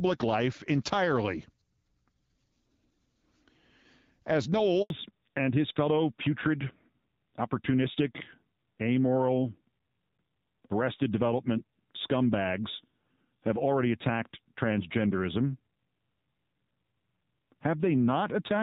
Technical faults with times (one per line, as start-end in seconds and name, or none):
4.82-4.90 handover gap
4.90-18.62 fallback to narrowband